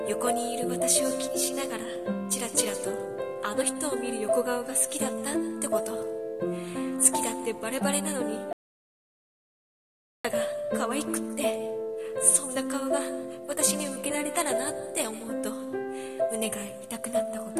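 At 8.53 s the sound cuts to silence with no room tone until 10.25 s, about 1.7 s lost, an audio dropout to silence, likely a lost input while recording carried on.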